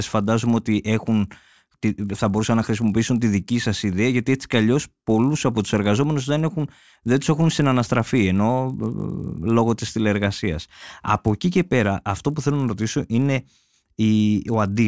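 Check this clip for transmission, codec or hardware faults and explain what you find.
There's one fault, and it runs the whole way through: the resampler restarted on every block. Each 20 ms chunk was converted on its own, which sounds like a 24 kHz to 16 kHz conversion, so at every block edge the filter was missing the real neighbouring samples and left a small error behind. Those edges land 50 times a second, and you hear them as a steady 50 Hz buzz riding on the speech that drops out whenever the talker pauses.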